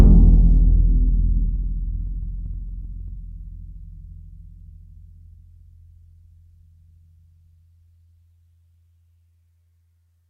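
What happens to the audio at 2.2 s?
At 2.2 s the music is inside a jitter buffer speed-up running from 2.07 to 3.16 s. The receiver trimmed surplus buffered audio by cutting short pitch-period slices, about 40 ms in total, so playback runs at 104% with unchanged pitch and the tempo briefly hurries. A spectrogram shows harmonics holding their frequencies while events arrive slightly early; the waveform shows small splice points with no gaps.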